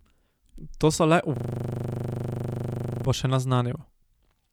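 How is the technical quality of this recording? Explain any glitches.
The recording has one glitch, a system hang loop. From 1.36 to 3.05 s, right after "so le" and before "bo še", a 40 ms slice of speech repeats about 42 times. The driver stalled while the hardware kept replaying one buffer, giving a steady 25 Hz buzz. On a waveform it shows as identical repeating blocks, and on a spectrogram as vertical stripes evenly spaced 40 ms apart.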